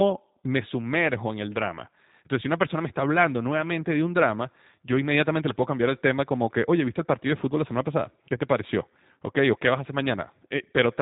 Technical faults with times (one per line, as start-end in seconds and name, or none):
0.00-11.02 G.729 codec